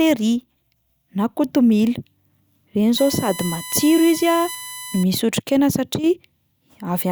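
From 2.98 to 5.03 s, a USB whine sits under the speech. It is a steady, fixed-pitch tone built on 1 kHz, with harmonics stacked above it. The strongest of these is at 11 kHz. It runs roughly 15 dB below the speech. The bus draws current in regular 1 ms frames, and that pulsing leaks into the audio through power or ground. The whine stops just before "misy otrikaina".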